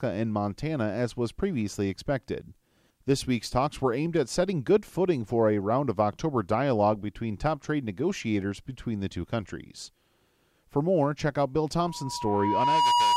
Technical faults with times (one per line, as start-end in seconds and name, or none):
11.80-13.16 loudspeaker feedback squeal